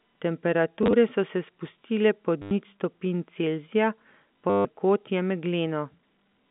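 Short robotic stutters with a 100 Hz buzz, at 0.83 to 0.93 s before "so se spustile", 2.42 to 2.51 s before "nič stopinj", and 4.5 to 4.65 s: packet loss with the last packet repeated, fitting 10 ms packets, over a clean telephone band.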